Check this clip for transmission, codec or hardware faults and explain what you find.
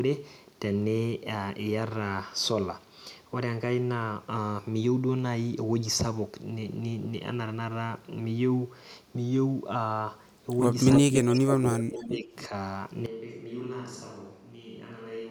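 Yes, the clip has three kinds of fault, all packed into the last few seconds of the speech.

Echo leak appears at 10.96 to 11.38 s, again at 11.96 to 12.09 s, and briefly at 12.38 to 12.45 s. Each time a delayed copy of the talker comes back about 276 ms late, most likely from a far-end loudspeaker whose echo canceller let part of the pickup through. The first return sits about 10 dB under the direct speech, the later scraps about 20 and 25 dB down. The fixed lag and distinct repeat separate it from ordinary room reverberation, which smears rather than repeats.

Speech suppressed in double talk runs from 11.07 to 12.33 s, overlapping the echoes. The likely cause is an echo canceller that, with both sides talking, could not tell its own talker from loudspeaker echo and turned everything down. The voice dips in pieces, deepest by roughly 25 dB, for about a second in total. Unlike a packet dropout, it is attenuation tied to the overlap, not abrupt silence or clicks.

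A switch to a distant microphone happens at 13.06 s and holds to the end. The voice suddenly turns roomy and hollow, with thinner bass, about 10 dB quieter, and room noise rises to roughly 35 dB below the speech. This is most likely the close microphone dropping out and a farther one taking over. The instant, lasting change of tone and noise floor sets it apart from a simple gain drop, which would keep the same close, dry sound.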